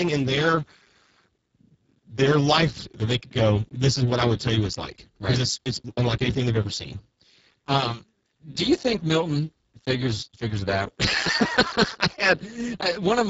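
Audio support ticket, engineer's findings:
Hoarse, noisy, robotic speech throughout, whole clip. Buzzy texture, nothing audible above 7.7 kHz. Component: Speex codec in the voice path, heavy codec damage. Mechanism: CELP coder starved of excitation bits, so the voice becomes rough and vocoder-like. Degradation level fits a very low setting around 6 kbps. Top band near 4 to 7.7 kHz is only shaped noise-like fill, not real detail.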